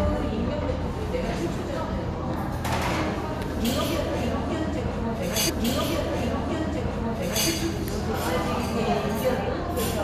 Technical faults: stream segment repeated

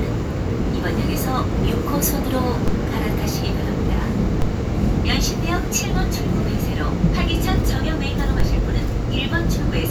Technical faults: DC step

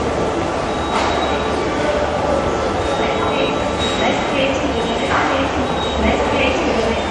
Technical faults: MP3 compression

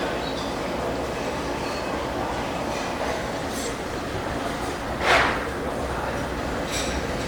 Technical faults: call bitrate drop

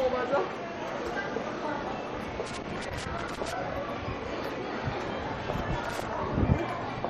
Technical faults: MP3 compression; loose connector crackle

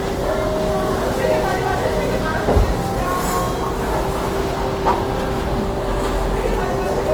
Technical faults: Opus compression

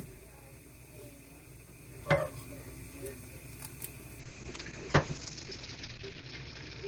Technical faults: call bitrate drop

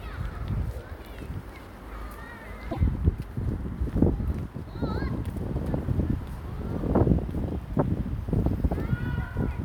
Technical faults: broken MP3 bit reservoir

